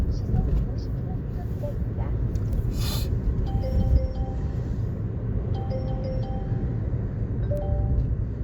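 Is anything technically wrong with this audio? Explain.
Yes, there are two bit error spikes, one at 2.53 s and another at 7.57 s. Each is a single sample where one bit got flipped, say in memory or on a digital link, so the value leaps by a power of two and snaps straight back on the next sample. Because it's just one sample, the energy spreads across the whole spectrum, and you hear a sharp tick that has nothing to do with the surrounding sound.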